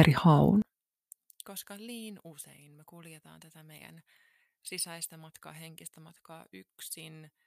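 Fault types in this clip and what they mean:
One channel inverted: from 0.62 s to the end, the speech drops by about 28 dB, with its centre almost gone and only a faint residue left. This likely comes from one stereo channel having reversed polarity, so the centred speech, identical in both channels, cancels when they are summed to mono, leaving only their small difference.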